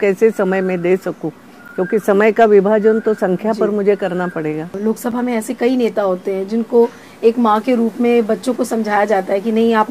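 At 1.68 s and again at 5.11 s the audio drops to a block of digital silence, about 11.6 ms then 5.8 ms long, consistent with 512- and 256-sample output buffers going unfilled. Each dropout is short enough to be heard as a tick or dip rather than as silence.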